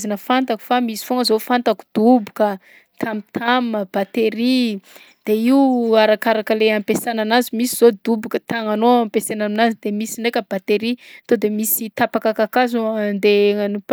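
No technical faults can be heard anywhere in this recording.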